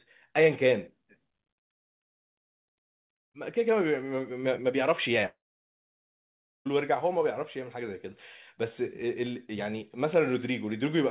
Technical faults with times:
5.26-6.67 long network dropout

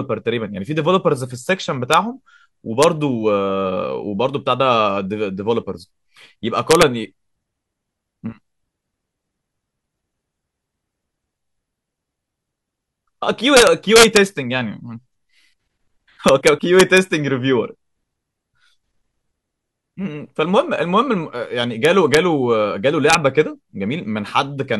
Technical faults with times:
1.94 integer overflow
2.83 integer overflow
6.71-6.83 integer overflow
13.57-14.17 integer overflow
16.28-16.98 integer overflow
21.85-22.17 integer overflow
23.10-23.15 integer overflow

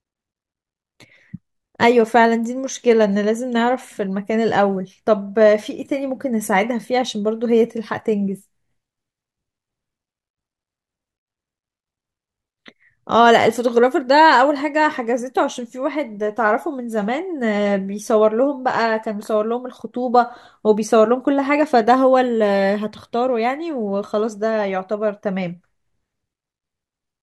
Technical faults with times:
none

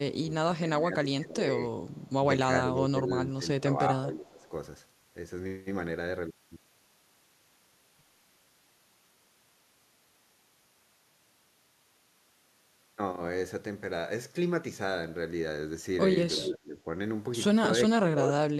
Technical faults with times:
0.13-1.58 speech suppressed in double talk
1.89-2.12 echo leak
2.52-4.52 speech suppressed in double talk
4.28-4.48 echo leak
16.35-16.78 speech suppressed in double talk
17.89-18.39 speech suppressed in double talk

